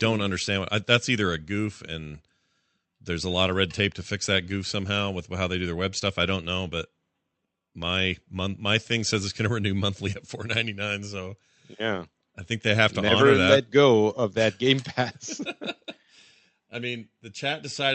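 No technical faults are audible.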